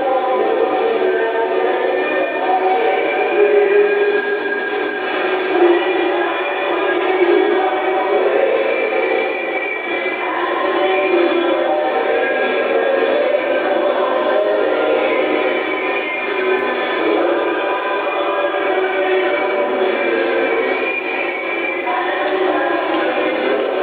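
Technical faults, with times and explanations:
No technical faults are audible.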